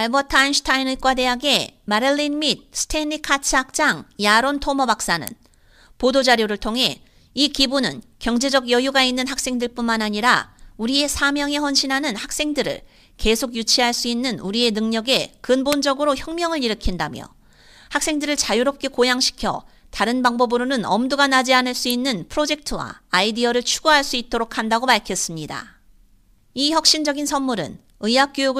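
A nearby switch or motor likely arced and the audio line picked it up, producing an electrical switching spike at 5.27 s, 15.73 s and 21.90 s. Each is a sharp, brief snap over the speech, the first two the loudest and the last about 5 dB lower.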